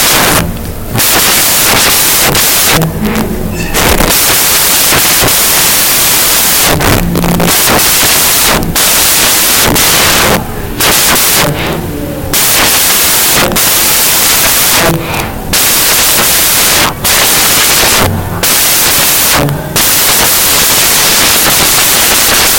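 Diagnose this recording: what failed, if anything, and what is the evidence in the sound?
The sample-format conversion stage broke: the samples are built from the wrong bytes for the whole clip. Each value is assembled off by a byte or in the wrong order, so the jittery low bits end up on top. The speech comes out as loud, harsh broadband noise.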